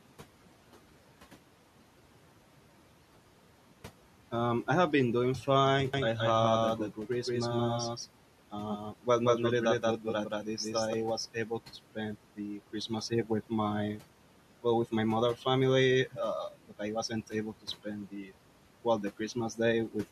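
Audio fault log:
5.94–10.94 s, doubled audio track: just after "have been doing fine", a second full-band copy at about the same level trails the sound by roughly 200 ms and starts and stops abruptly. Unlike an echo, it has no decay or room colour. The likely cause is a second, slower capture path.
8.78–9.07 s, 9.80–10.06 s, 12.36–12.91 s (after "to spend"), 18.11–18.32 s (between "wasn't able to spend" and "well the"), speech cut by the noise suppressor: short stretches of speech dip by about 9 to 12 dB and sound swallowed. Unlike a dropout, the sound is faint rather than silent, and the room noise, about 21 dB below speech, dips along with it.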